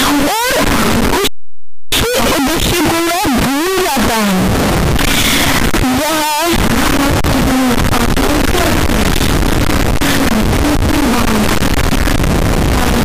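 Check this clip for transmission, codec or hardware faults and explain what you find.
One fault runs from start to finish: the sound is brutally loud and harsh throughout, with quiet stretches blasting as hard as loud ones.

Signed and unsigned mixed up, for the entire clip: the 8-bit samples were likely read with the wrong sign convention, flipping the top bit. Each small swing through zero becomes a leap across the full range, producing coarse, buzzy distortion. On a waveform the trace sits pinned near the rails with vertical jumps; a spectrogram shows dense broadband energy. The 8-bit depth itself is read at its proper width.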